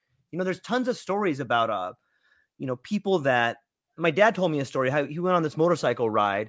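Nothing technical stands out in this short bit of speech; there's no fault to point to anywhere in it.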